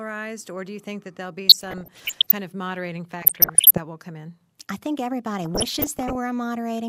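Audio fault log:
1.47–2.31 s, 3.20–3.78 s, 5.41–6.15 s: DAB burbling. Short blips of noise in single sub-bands follow "think that there'll be", "kind of moderating" and "come in I think". Bit errors from weak reception corrupt MP2 samples and scale factors, so single sub-bands blip or jump in level for up to a frame. The middle burst sounds harshest, fitting more errors there.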